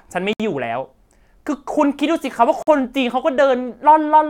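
Speech with two brief silences opening mid-sound: a gap at a join of encoded pieces at 0.33 s, lasting 65 ms, and another at 2.63 s, lasting about 48 ms. Untrimmed encoder start delay and last-frame padding leave these dropouts, which show as flat waveform stretches and blank vertical spectrogram bands with smeared edges.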